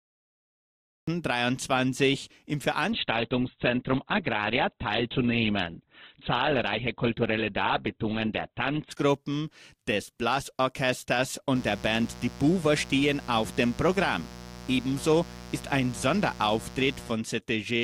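The speech comes in already going. For the first 1.08 s there's pure digital silence, then the audio snaps on in the middle of a sound, with no attack or fade-in. That's a cut-off start: the recording or stream began a moment late, so whatever was being said before 1.08 s is simply gone, and the opening lands abruptly rather than building naturally.

From 2.92 s to 8.92 s the quality suddenly sags, then pops back just as abruptly, with no gap either side. Everything above 4.4 kHz disappears, so the speech goes dull and boxy, and codec artefacts rise. It sounds like an adaptive stream at a lower bitrate, switching to a much leaner version while the connection slowed. The character fits something like Opus stepping down from a comfortable rate to around 12 kbit/s for those six seconds.

Then from 11.55 s to 17.12 s a steady, raspy buzz sits under the speech, roughly 15 dB below it. That's mains buzz on a 60 Hz supply. 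Something like a dimmer, rectifier or unshielded line is letting sharp switching spikes in twice per cycle, and their harmonics climb well up the spectrum. That's why it rasps and grates rather than just humming low.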